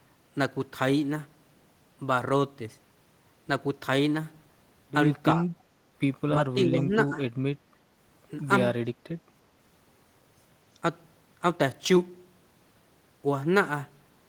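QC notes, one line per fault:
5.35–5.39 s, speech suppressed in double talk: a brief, shallow dip in the speech, likely the echo canceller ducking everything while both ends talked.
6.37–7.22 s, speech suppressed in double talk: the speech pumps down, up to roughly 10 dB for about half a second in total, likely the canceller again mistaking the talker for loudspeaker echo.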